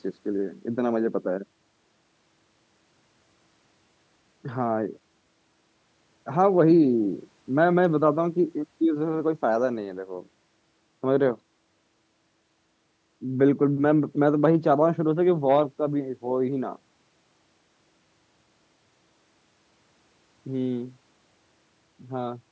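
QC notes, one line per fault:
No faults heard anywhere in this speech recording.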